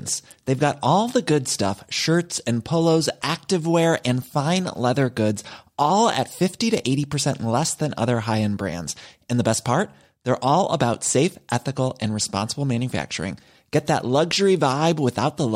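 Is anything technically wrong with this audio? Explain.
No, nothing technically wrong can be heard in this speech recording.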